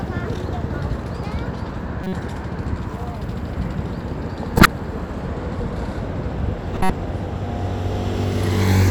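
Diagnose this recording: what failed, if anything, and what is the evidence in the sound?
The codec stage failed: damaged compressed frames reached the decoder and were decoded anyway rather than concealed. This is a corrupt frame decoded fault, where flipped bits give wrong gains or misread codes that put energy at the wrong frequencies. Short bursts appear at 2.04–2.13 s, 4.56–4.66 s and 6.74–6.90 s, each spanning a few frames, with the last one longer. The second burst is the strongest, the third is close behind, and the first is clearly quieter.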